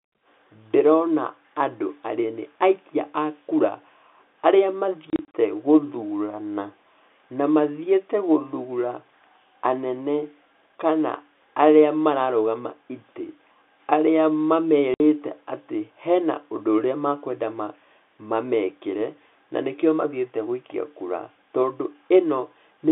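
Packet loss filled with silence chops the speech from 5.1 to 5.34 s, where 120 ms of short gaps fit 30 ms packets, and again at 14.94–15.0 s with a 60 ms hole.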